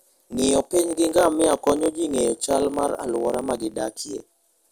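Throughout, a block size mismatch (truncated) discards each block's tail. This causes a 43.1 Hz buzz (fitting 1024-sample reads) and 1.12-times-faster speech at normal pitch, unlike a resampling speed-up.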